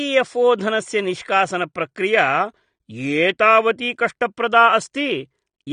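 From start to finish the speech carries plainly audible AAC compression damage, likely from AAC-LC at a low bitrate, with the sound pointing to roughly 32 kbps. Nothing survives above 9.7 kHz, and within the remaining band the encoder has quantised away detail, leaving sibilants fizzy and vowels warbly and smeared. A simple low-pass filter would dull the top end cleanly without that swirling texture.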